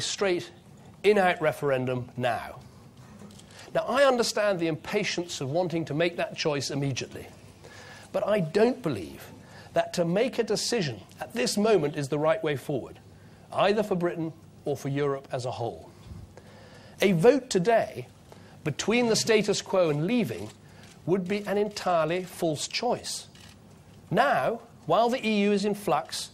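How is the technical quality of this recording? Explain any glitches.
The technical quality of this recording holds up, with no glitches to explain.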